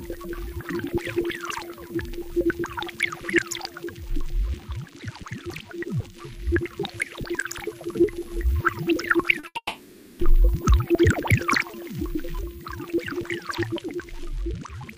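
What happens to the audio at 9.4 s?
At 9.39–9.45 s a short concealed packet loss fills a 40 ms gap by extending the preceding sound, heard as a brief smear; spectrograms show smoothed, repeated texture. A burst of packet loss follows at 9.47–9.57 s: 80 ms vanish, replaced by a fading continuation, so the waveform decays before audio resumes further on.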